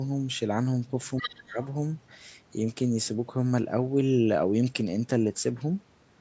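From 1.16 to 1.66 s a second, fainter voice sits under the talker, roughly 10 dB down. This is the other side's voice leaking through. The far end was played over the talker's loudspeaker, picked up again by the microphone, and the echo canceller likely failed to subtract all of it. The leaked voice is quieter and set apart from the near speech, lasting about half a second before it clears.

Overlapping that, from 1.19 to 1.58 s, the talker's own speech is pulled down, which is speech suppressed in double talk. With both sides active at once, the canceller likely could not tell the near voice from the returning echo and attenuated everything. The dips reach around 20 dB at their deepest and add up to roughly a third of a second, so the talker's level sags while the leaked voice is present.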